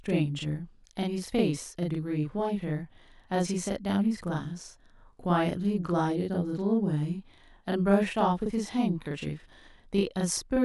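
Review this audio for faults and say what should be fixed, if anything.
One channel is arriving 40 ms behind the other, and the two are then summed to mono, so a channel delay (doubling) runs through the whole speech clip: every syllable is followed by an equal-level copy, heard as a tight slap or doubled voice. To prevent it, align both channels sample-accurately before any mono fold-down, and check the buffer handling on the late channel.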